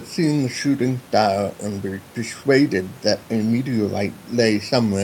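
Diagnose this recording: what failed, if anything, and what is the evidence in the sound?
Nothing stood out on listening to this speech recording, with the only background being the room noise about 26 dB below the voice, which belongs to the recorded space rather than to any stage of the system.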